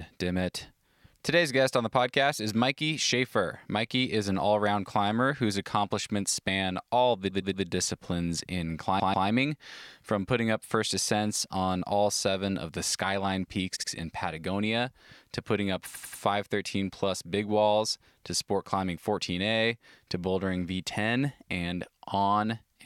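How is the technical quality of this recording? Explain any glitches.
The recording has four stutters from repeated frames, where a short stretch of compressed audio was stored or sent more than once and the decoder plays it again. At 7.29 to 7.64 s, after "accomplishments span all the", a 116 ms block plays three extra times. At 8.99 to 9.27 s, after "all the disciplines in", a 139 ms block plays twice more. At 13.75 to 13.89 s, a 70 ms block plays twice more. At 15.93 to 16.21 s, after "to putting up", a 93 ms block plays three extra times. Each repeat stretches the audio by its repeated time.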